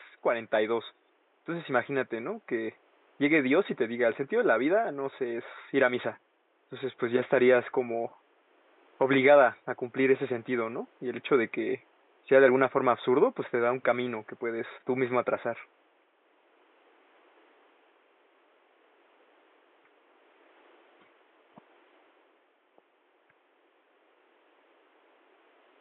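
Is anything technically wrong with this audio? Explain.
No, nothing here points to a technical problem; the faint room noise sits about 38 dB below the speech and is simply part of where the recording was made.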